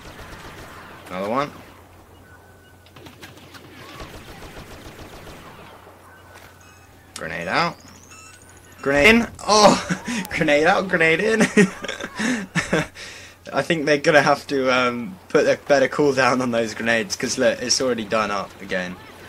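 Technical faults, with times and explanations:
0.30 s and 9.03 s, damaged data in a compressed stream: each is a brief chirp or blip lasting under 20 ms. Corrupted bytes in the compressed stream make the decoder misread those frames, lose sync and hunt for the next valid frame header. Garbage output is produced during that recovery. On a spectrogram each shows as a narrow, smeared block of broadband or oddly tonal energy. In the waveform, the shape changes abruptly and clashes with the signal around it.
1.37 to 17.81 s, word clock ticks: sharp, uneven clicks recur roughly every one and a half seconds, about ten in all. The receiving device runs on its own clock, not locked to the sender's, and the two drift apart by around 15 ppm. Each time they slip past one another, a single sample is dropped or repeated and its neighbours are misread. A spectrogram shows thin vertical lines spanning the full band at regular spacing. 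The waveform shows isolated one-sample spikes or steps.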